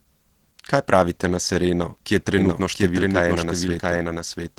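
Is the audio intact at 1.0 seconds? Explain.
No. At 1.0 s the speech carries Opus compression damage, and it runs through the whole clip, not just that moment. The sound is plainly degraded: muffled, hoarse and grainy, though the top end is not cut off. This is likely a low-rate Opus encode, near 16 kbps, in its hybrid speech mode. With so few bits, the encoder fills bands with noise or folded copies of lower bands instead of their true detail.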